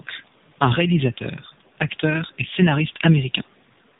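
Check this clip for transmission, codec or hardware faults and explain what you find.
Tandem speech coding runs through the whole of this roughly 4 s speech clip. The sound points to a call that passed through an AMR-NB-style coder, was decoded to G.711 mu-law at a network border, then recoded by AMR-NB again at a lower rate. Each coder models the previous one's errors as if they were speech, so distortion compounds. The result is rough, muffled and warbly, with nothing above 3.8 kHz.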